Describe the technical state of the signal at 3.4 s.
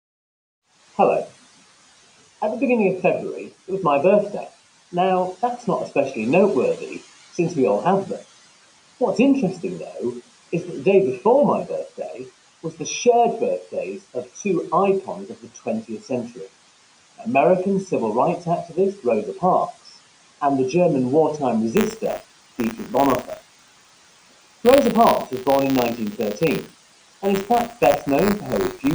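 At 3.4 s the signal is intact, with no dropout, distortion, glitch or other fault to be heard.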